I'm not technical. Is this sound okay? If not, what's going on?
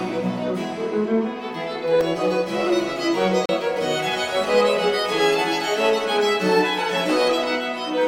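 No. There are two brief dropouts, each a block of digital silence. The sound suddenly stops and then returns, with no fade at either edge. At 2.01 s the gap lasts under 3 ms, so it comes across as a single tick. From 3.46 to 3.49 s the gap is about 34 ms. That is long enough to hear as a tiny hole. The likely cause is the playback program not delivering audio in time.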